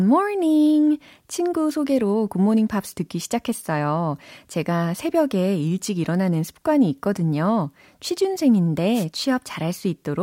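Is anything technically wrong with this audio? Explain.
Yes. From 8.94 to 9.05 s there is a wireless microphone noise hit: the FM radio link briefly faded through multipath cancellation, letting receiver hiss surge into a short burst of static. A spectrogram shows a broadband vertical smear; the waveform, a brief noisy thickening.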